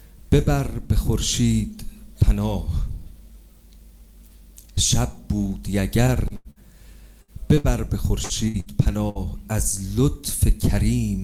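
From 6.07 to 6.59 s there is repeated packet loss with a robotic sound: five gaps, the longest 87 ms, about 120 ms of audio gone and 185 ms patched by repeating the preceding sound. The result is a choppy stutter with pieces missing. A spectrogram shows smeared, frozen harmonic bands broken by dropouts.

Bursts of packet loss follow at 7.22 to 7.31 s and 7.58 to 7.67 s. In each, about 60 ms is lost, and the last sound is extended for roughly 60 ms while it fades, so a brief held buzz or hiss gives way to audio that resumes further on. On a waveform this appears as a decaying plateau followed by a jump.

At 8.24 to 8.33 s a late packet causes a short stall. The jitter buffer ran dry, so the receiver stretched the current sound by 59 ms, then picked up where it had stopped, with nothing missing. The result is a slightly overlong hold with a slight buzz or dip, visible as horizontally stretched spectral lines.

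Further bursts of packet loss occur at 8.48 to 8.57 s, 8.60 to 8.69 s, and 9.09 to 9.18 s, each again about 60 ms lost behind a 60 ms fading extension. The first two fall almost back to back.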